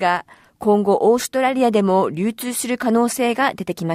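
No technical faults are audible.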